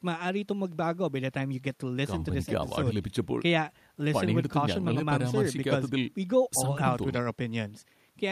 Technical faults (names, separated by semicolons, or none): none